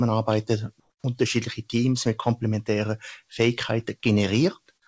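A noise suppressor applied to music or sounds is active throughout. It was tuned for speech, so it treats sustained tones, ambience and decaying tails as noise and turns them down. Attacks pass through but held parts sink, giving a pumping level swing of about 5 dB.

Comfort noise in place of the background runs from 0.80 to 1.04 s. For 240 ms the real background, which sits about 51 dB below the loudest parts, gives way to a flat, featureless hiss about 6 dB quieter. The likely cause is that the sender stopped transmitting during the pause and the receiver filled the gap with synthetic noise.

Onset clipped by the voice detector follows from 1.02 to 1.04 s. The returning sound loses its first 20 ms, so it starts abruptly without its soft lead-in. This is likely because the sender's detector reacted late, leaving that slice unsent and covered by comfort noise. Across the clip nothing is heard above 8 kHz, which fits the G.722 call-codec path.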